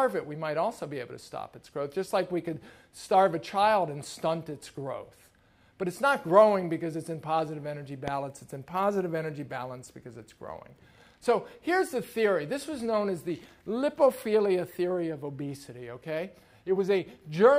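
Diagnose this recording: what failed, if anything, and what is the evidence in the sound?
A single loud pop at 8.08 to 8.10 s points to the analogue wiring stage, most likely a plug, switch or static discharge injecting a sudden voltage step that the downstream circuitry shaped into a brief pulse. It rises around 10 dB above the surrounding audio, and the sound continues underneath. On the waveform it appears as a narrow spike standing clear of the envelope. On a spectrogram it shows as a thin vertical broadband stripe.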